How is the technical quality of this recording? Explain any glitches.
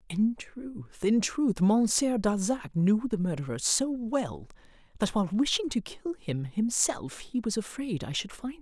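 No glitches can be heard in this speech recording, whose signal stays technically sound throughout.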